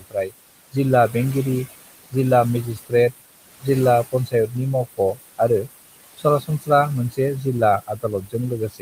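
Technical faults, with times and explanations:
Throughout, noise suppressor artifacts: the processor pulls the steady background down by about 19 dB frame by frame, so the room noise, which sits about 14 dB under the speech, dips in the gaps and rises beneath syllables. The noise pumps with the speech, unlike a plain level change.
0.00 to 1.15 s, speech cut by the noise suppressor: just before "बेंगिरि जिल्ला", roughly a fifth of a second of quiet speech is mistaken for noise and dropped by up to about 20 dB, so soft sounds are swallowed rather than cut off cleanly.
2.76 to 2.93 s, speech cut by the noise suppressor: right after "बेंगिरि जिल्ला", about a tenth of a second of speech sinks by up to about 19 dB along with the background, leaving it faint instead of missing.
3.61 to 5.40 s, speech cut by the noise suppressor: scattered softer sounds totalling around a third of a second are turned down by up to about 16 dB, so they turn faint, which sets them apart from a dropout's hard silence.
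6.17 to 8.81 s, speech cut by the noise suppressor: through to the end, quiet parts of the speech are treated as background and lowered by up to about 19 dB, making endings and soft phrases sound swallowed while louder syllables come through.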